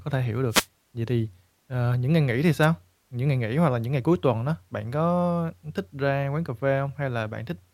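The radio link of an analogue FM wireless microphone fades twice as reflected signals cancel at the receiver, giving a wireless microphone noise hit each time. Receiver noise surges in as a brief swish of static over the speech. The first runs from 0.50 to 0.67 s, just after "thể hiểu". The second, shorter one runs from 2.62 to 2.66 s, right after "những ngày nghỉ thì".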